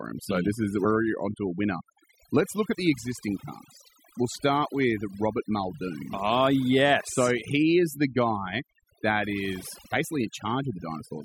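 A speech recording with overdone noise removal throughout: the suppressor pulls individual frequency bands down whenever they sit near its noise estimate, leaving a near-silent background sprinkled with twinkling specks. A spectrogram shows a blotchy, holed texture with isolated bright dots between phrases. From 0.84 to 0.86 s there is damaged data in a compressed stream, heard as a brief glitch where the decoder misreads corrupted frames and resynchronises. It appears as a discontinuity in the waveform.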